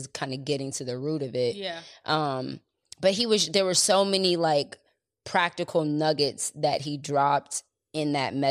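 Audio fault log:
Nothing to flag here, just speech with no faults to report.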